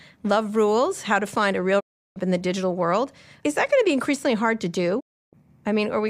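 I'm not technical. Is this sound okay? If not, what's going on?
No. This speech clip has two digital broadcast dropouts, at 1.79 to 2.18 s just before "in the", and at 4.99 to 5.35 s right after "be increasingly hard to". Each time the receiver lost the signal, and the sound quickly faded to silence for about a third of a second. Whatever was said in those gaps is gone.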